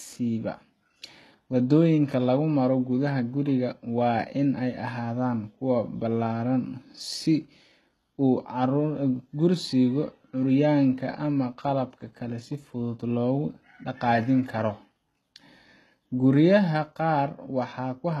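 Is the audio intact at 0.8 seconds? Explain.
No, at 0.8 s and throughout, the treble is rebuilt and gritty, with nothing above 12.3 kHz, likely HE-AAC compression copying lower bands upward at a very low bitrate.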